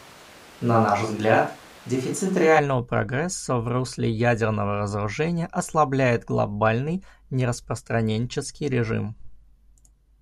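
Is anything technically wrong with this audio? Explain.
Yes. From the very start until about 2.58 s, the speech sounds roomy and hollow, with thin low end and audible room noise roughly 25 dB below the voice, even though the overall level stays about the same. At 2.58 s it snaps abruptly to a close, full sound. This is likely a switch to a distant microphone: the close mic's signal was missing for that stretch, so a farther pickup captured more room reflection and less direct bass.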